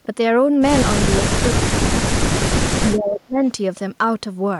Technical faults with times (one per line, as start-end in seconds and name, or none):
1.16-2.47 speech suppressed in double talk
2.76-3.43 speech suppressed in double talk